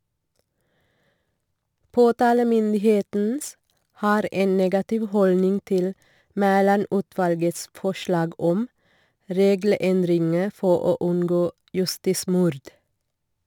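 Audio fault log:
Throughout: crude rate conversion. Unfiltered sample repetition, consistent with a 44.1 kHz to 48 kHz change, leaves a gritty inharmonic fizz roughly 30 dB below the speech.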